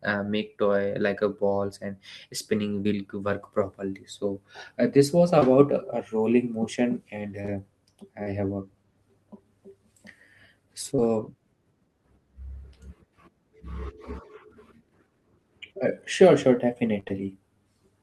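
At 2.83 to 2.88 s, 5.39 to 5.50 s and 10.96 to 11.00 s there's short concealed packet loss: about 20 ms of speech each time arrived too late, and the decoder stretched the previous sound to cover it, leaving a quick smear or wobble. Between 7.42 and 8.28 s you get scattered short gaps, roughly three small holes of around 20 ms or less, patched the same way, so it's little hiccups in otherwise clear speech. Then at 17.00 to 17.12 s it turns into repeated packet loss with that robotic sound: three gaps back to back, the longest 21 ms, with about half the stretch filled in, so it goes choppy.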